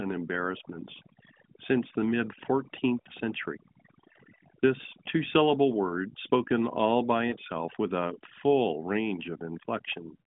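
Speech heard through a narrowband mobile channel, with a 150 Hz to 3.6 kHz band and light codec colouring that suggests high-rate AMR-NB. Overdone noise removal runs throughout. The background sinks to near silence with twinkling specks. Those isolated specks in silence set it apart from the codec's own swirling warble. Lost AMR speech frames cause brief warbling dips at 3.02–3.07 s and at 7.30–7.34 s, between "word spoken all by" and "with a full". Each fits one 20 ms frame rebuilt from the previous pitch and tract settings, which makes it a warble rather than the clean gap of a plain dropout.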